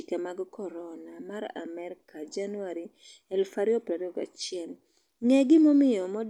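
No technical faults can be heard in the recording, so there is nothing to place in time order.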